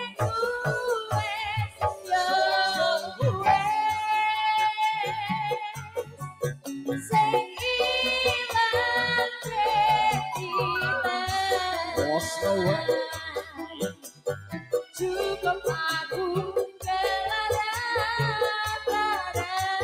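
All the way through, a noise suppressor meant for speech is working on material it shouldn't. It keeps mistaking steady, sustained parts for noise and pulling them down, with the level swinging by around 10 dB, so the sound pumps and thins while sharp attacks slip past.

You can hear the sound cut by the noise suppressor at 0.02–0.26 s, 1.01–2.12 s, 2.99–3.23 s, 5.07–5.26 s, 5.53–6.68 s, 13.27–15.01 s and 16.68–16.85 s. Held or fading sound sinks by about 12 to 18 dB in most of these, only about 4 dB at 5.07 s, with decays chopped short.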